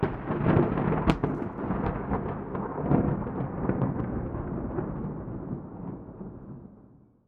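One channel drops out in this sound recording from 1.1 to 1.58 s and again from 4.0 s to the end. The level falls abruptly by about 6 dB, likely because one stereo side is lost before the mono sum.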